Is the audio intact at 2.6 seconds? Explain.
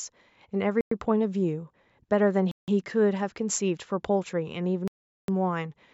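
No, there's a dropout there. From 2.51 to 2.68 s the sound cuts to about 165 ms of silence, then picks back up. It's likely a Bluetooth stall: interference held up packets, the headphones' buffer ran dry, and playback paused until resent data arrived.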